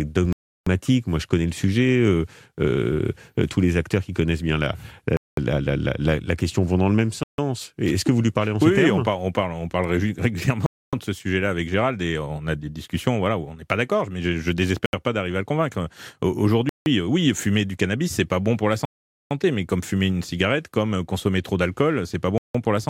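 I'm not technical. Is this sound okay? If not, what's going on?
No. The speech drops to complete silence eight times, at 0.33, 5.17, 7.23, 10.66, 14.86, 16.69, 18.85 and 22.38 seconds, for about 0.07 to 0.46 seconds each. These are likely Bluetooth stalls: radio interference delayed the audio, so the headphones briefly ran empty.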